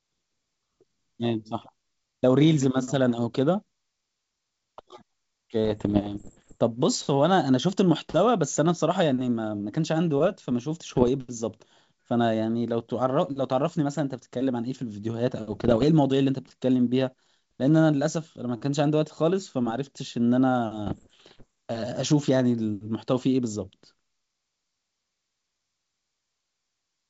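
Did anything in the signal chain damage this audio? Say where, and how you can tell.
Yes, in the transmission stage: bit errors on an ADPCM link, riding on a G.722 wideband coding path that is clean at what sounds like its full 64 kbit/s rate. Pops, rough bursts and brief level jumps cluster at 5.65–6.57 s, 10.88–11.09 s, 15.51–15.85 s and 20.86–21.44 s, at an error rate somewhere near 1 percent. Each corrupted bit knocks the decoder's step size and predictor off track, so the damage rings on briefly after every hit.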